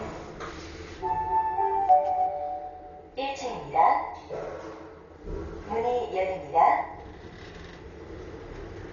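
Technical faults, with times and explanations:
Throughout, Dolby Digital compression: the sound is dull and band-limited, with nothing above 6.9 kHz, and a rough, fluttering noise clings to tonal parts. This is likely heavy AC-3 style coding at a very low rate, consistent with around 40 kbps, where the encoder narrows the band and leaves many frequency lines without mantissa bits, so the decoder fills them with dither noise. A spectrogram shows a hard ceiling near 6.9 kHz and grainy, speckled noise around tonal lines.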